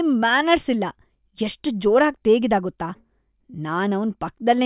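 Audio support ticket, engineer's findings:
Listened to the full speech clip and nothing stood out; no findings to log.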